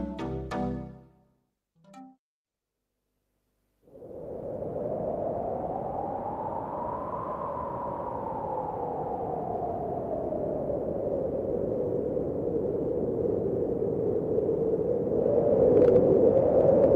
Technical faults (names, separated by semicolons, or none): none